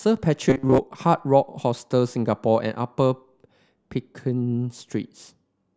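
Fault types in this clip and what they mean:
Robotic sound from repeated short buffers: from 0.50 to 0.80 s speech turns into a rigid 133 Hz metallic buzz, likely a 7.5 ms chunk replayed over most missing audio.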